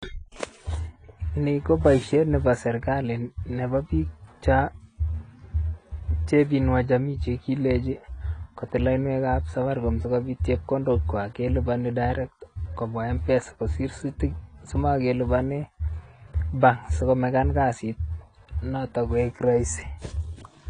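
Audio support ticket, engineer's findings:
Speech dull and smeared throughout, nothing above 10.2 kHz, sibilants fizzy and warbling, damage plainly audible. Likely AAC compression, AAC-LC: low bitrate forced the band limit down and coarse quantisation of each frame's spectrum against a hearing model left gaps and smearing, consistent with roughly 32 kbps.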